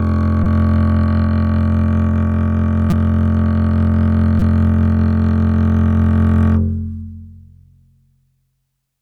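At 0.44–0.46 s, 2.90–2.93 s and 4.39–4.42 s the music hits a repeated buffer: a tiny 5.8 ms slice, which fits a 256-sample buffer, loops four extra times, giving a brief buzzy stutter with hard joins and dropping around 20 ms.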